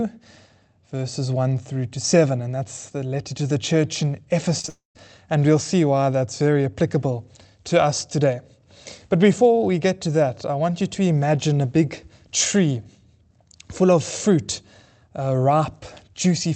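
Speech carried over an Opus call path, which fits about 32 kbps with the high end cut off above 8 kHz. Right after "to the church in", short concealed packet loss occurs at 4.59 s, 4.61 to 4.65 s and 4.67 to 4.69 s: late packets were patched by extending the preceding sound, leaving quick smears and wobbles. A long network dropout likely follows from 4.69 to 4.96 s, where roughly 260 ms of audio is lost, the concealment fades out, and about 140 ms of silence remains before the speech resumes.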